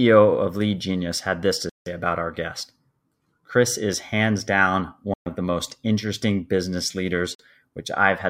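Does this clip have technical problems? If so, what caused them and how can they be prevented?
Yes. The speech cuts to silence at 1.69–1.89 s, 5.14–5.28 s and 7.35–7.41 s, then resumes further on. This is likely a Bluetooth dropout, with late packets discarded. Keeping the headphones near the source and away from 2.4 GHz interference prevents it.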